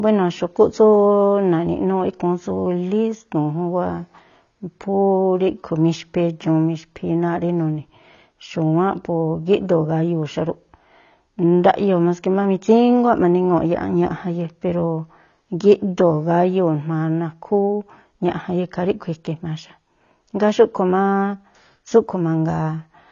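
AAC compression runs throughout the speech, with plainly audible codec damage and nothing above 7 kHz, so it sounds dull. The likely cause is AAC-LC quantising each frame's spectrum against a hearing model at a low bitrate, which fits about 24 kbps.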